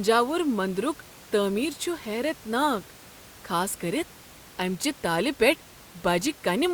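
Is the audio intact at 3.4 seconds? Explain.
Yes, the audio is intact at 3.4 seconds, with only the room's own background noise sitting about 23 dB below the speech.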